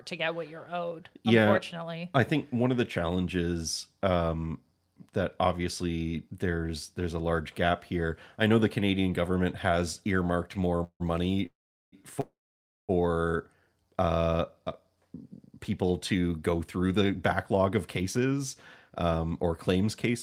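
Just after "canadian government has earmarked", at 10.77 to 10.82 s, there is a short stall from a late packet. A packet missed its playout time, the jitter buffer drained, and the receiver held the last sound for about 23 ms before resuming at the same point. The speech loses nothing but is briefly drawn out, with a faint buzzy smear.

Three call audio freezes follow closely: 10.84 to 11.02 s, 11.46 to 11.94 s, and 12.20 to 12.91 s. The likely cause is packets delayed in transit, leaving the buffer empty. In each freeze the last sound is extended as a decaying buzz, then drops to silence for about 70 ms, 390 ms and 540 ms respectively. The inserted gaps total 162 ms, 464 ms and 684 ms. The speech then continues where it left off, delayed but complete.

Two spans of jitter buffer speed-up come later: 15.51 to 18.40 s at 109% speed, and 18.90 to 20.10 s at 110%. After the backlog the buffer held more audio than its target. 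The receiver repeatedly cut out short slices of one or a few pitch periods to shed the extra delay, roughly 300 ms in the first span and about 150 ms in the second. Pitch stays the same, but the speech sounds noticeably rushed.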